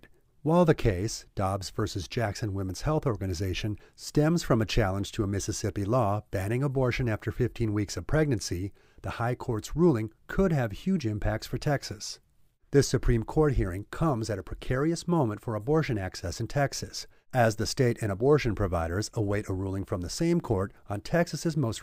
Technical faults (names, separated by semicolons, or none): none